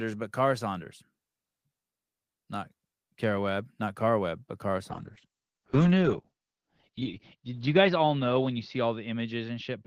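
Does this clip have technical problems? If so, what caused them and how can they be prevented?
Yes. A call bitrate drop starts at 4.91 s and lasts to the end: the Opus encoder falls from 32 to 8 kbps, bottoming out for 2.2 s, so the speech turns coarse and muffled as the audio band narrows to 8 kHz. Preventing it means giving the call steadier network capacity or setting a higher minimum bitrate, so the bandwidth estimate doesn't force the encoder this low.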